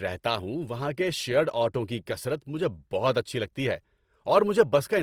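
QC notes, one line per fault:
Throughout: Opus compression. The speech is grainy and rough, likely from low-rate CELT-mode coding near 24 kbps filling bands with noise. The spectrogram shows speckled texture up to 20.2 kHz.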